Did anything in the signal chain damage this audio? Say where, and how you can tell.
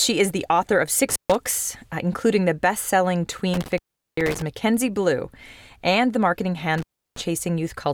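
Yes. The damage is in the analogue wiring, an intermittent contact. The speech drops out three times: around 1.10 to 1.35 s, 3.54 to 4.42 s, and 6.78 to 7.21 s. Each dropout starts and ends with crackle, and faint hiss remains while the line is open. The gaps last roughly 140 ms, 390 ms and 340 ms. A loose plug or cable is breaking the connection, then scraping back into contact.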